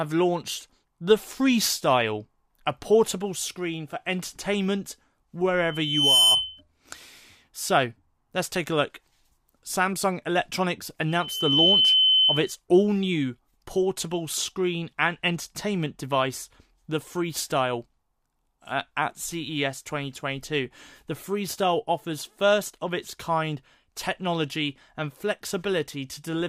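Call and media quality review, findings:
Loudspeaker feedback squeal, 5.64–6.61 s and 11.08–12.57 s: single 3.1 kHz tone swelling over about half a second. Microphone–loudspeaker loop gain exceeds one there. Self-building swell, not steady pitch, rules out interference whine.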